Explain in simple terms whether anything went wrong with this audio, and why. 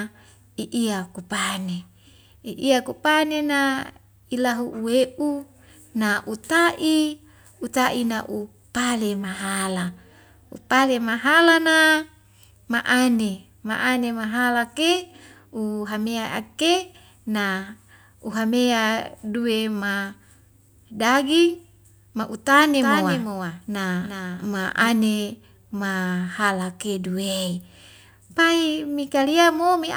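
From 22.81 to 24.89 seconds the speech suddenly gets a quieter echo about 0.4 seconds behind it, starting and stopping abruptly. This is a doubled audio track, most likely the same speech captured twice, with a second, slower path lagging behind.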